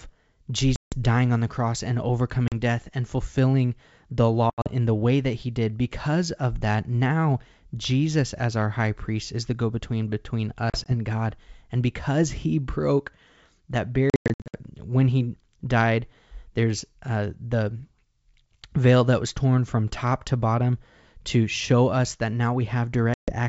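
Packet loss on an ADPCM call cuts hard-edged silent gaps at 0.76, 2.48, 4.50, 10.70, 14.10 and 23.14 s. These include a 160 ms gap before "dying on the cross" and scattered dropouts totalling 320 ms around 14.1 to 14.6 s, consistent with lost 20 ms packets. Each time, the G.722 decoder's adaptive predictor and step size drift from the sender's, so the speech resumes with brief distortion.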